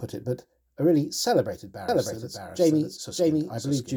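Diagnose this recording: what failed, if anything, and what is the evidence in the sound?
A doubled audio track cuts in abruptly at 1.89 s and runs to the end. A dry, full-band copy of the speech trails by about 0.7 s at roughly equal level. The likely cause is a slower second capture path mixed in with the first.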